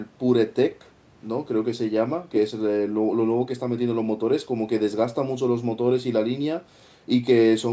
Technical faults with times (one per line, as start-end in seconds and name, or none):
none